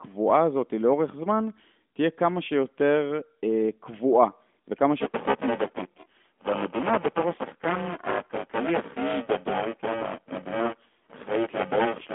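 From 5.00 s to the end, buffer tearing: writer and hardware reader have slipped and cross mid-period, so roughly half of each buffer replays audio about 10 ms old. The hard joins put a robotic 345 Hz buzz on the speech, which fits a 128-sample buffer.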